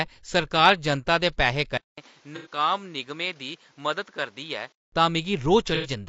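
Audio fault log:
throughout: low-delay AAC compression. The speech sounds rough and grainy, with noise filling the gaps between harmonics and a thin, synthetic top band. This is likely AAC-ELD at a rate that fits about 32 kbps, where short frames blur pitch detail, unlike a steady hiss that would sit under clean harmonics.
1.78 to 4.92 s: input switched to a poorer device. After about 200 ms of silence the sound turns duller and somewhat quieter, with nothing above 7.6 kHz and a faint new noise floor, then clears again. The likely cause is a change to another microphone. The change of tone, level and noise together separates it from plain low-pass filtering.
2.36 to 2.47 s and 5.75 to 5.90 s: AAC frame loss with concealment. Each patch lasts about 90 ms and sounds smeared and noisy as the decoder rebuilds it from the last good spectrum. Because the gap is filled rather than left silent, it differs from a dropout or a hard cut.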